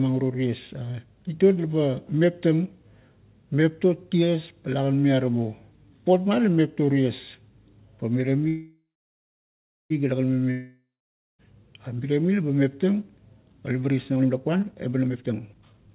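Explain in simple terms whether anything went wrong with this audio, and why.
From 8.48 to 9.93 s the speech stalls into a fading buzz, then about a second of silence, and resumes exactly where it stopped. That is a call audio freeze, likely from packets held up on the network.

From 10.51 to 11.42 s the sound fades to silence again, but this time nearly 0.9 s of speech never comes back. That is a long network dropout, likely from packets lost in transit.

Right after "pa leba", at 14.12 s and through to the end, the talking suddenly runs about 1.44 times faster with the same pitch, sounding hurried. This is a jitter buffer speed-up: the receiver snipped out tiny slices, roughly 0.7 s in total, to catch up after the earlier delay.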